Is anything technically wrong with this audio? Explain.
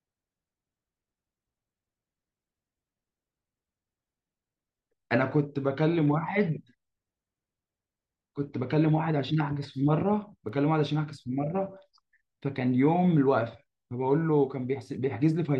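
Yes, there's one glitch. At 10.49 s a bit error spike gives a single sharp tick: one flipped bit jumps one sample to about -39 dBFS, then it snaps back.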